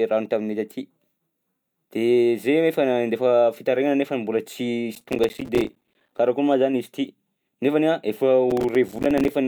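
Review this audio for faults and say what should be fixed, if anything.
A gritty, tearing crackle rides over the speech from 4.95 to 6.18 s and again from 8.50 to 9.35 s, clearing as soon as each stretch ends. This is processor overload crackle: the processor could not fill its small audio buffers in time, so dozens of deadlines were missed again and again, each leaving a hard-edged sliver of silence. The tiny gap spacing fits a buffer of around 5 ms. Prevent it by enlarging the buffer or reducing processing load during recording and playback.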